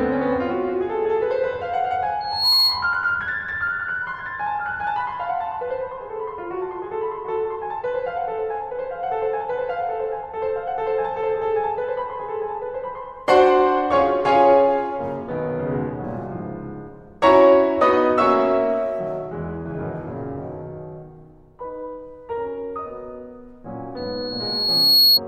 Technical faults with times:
2.20-3.05 loudspeaker feedback squeal
23.96-25.20 loudspeaker feedback squeal

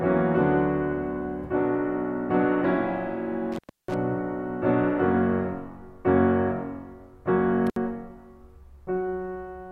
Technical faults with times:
3.52-3.94 intermittent contact
7.67-7.76 intermittent contact

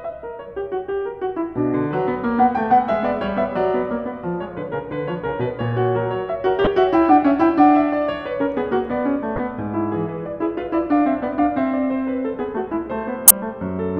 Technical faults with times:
6.64-6.67 corrupt frame decoded
9.36-9.39 corrupt frame decoded
13.27-13.31 corrupt frame decoded

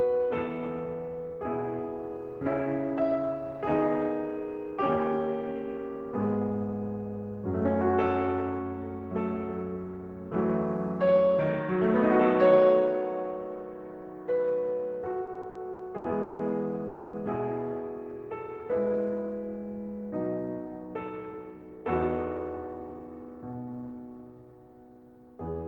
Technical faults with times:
15.25-16.42 repeated stalls (stutter)
16.87-17.16 call audio freeze
18.17-18.97 jitter buffer slow-down

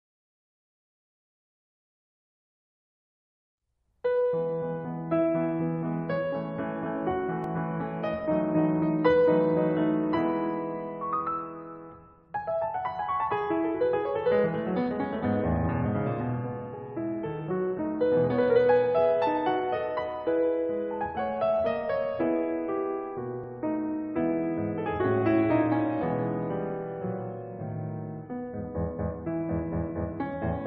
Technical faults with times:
7.44 overlap between stream segments
23.44 overlap between stream segments

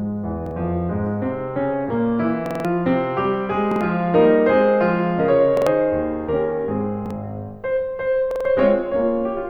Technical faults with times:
0.46-0.51 repeated buffer
2.46-2.65 repeated buffer
3.72-3.81 repeated buffer
5.57-5.67 repeated buffer
7.06-7.11 repeated buffer
8.31-8.45 repeated buffer

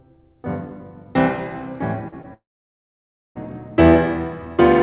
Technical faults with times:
2.08-2.26 short concealed packet loss
2.34-3.37 long network dropout

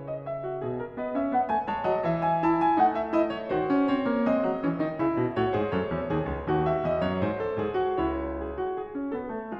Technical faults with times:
none

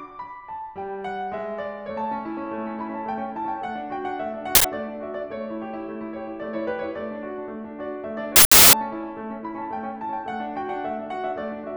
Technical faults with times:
4.55-4.64 uninitialised buffer
8.36-8.73 uninitialised buffer

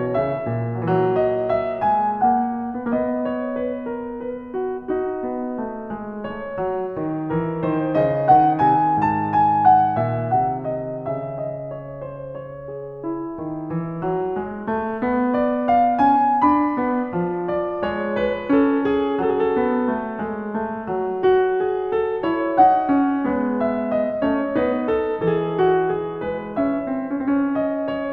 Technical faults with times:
none

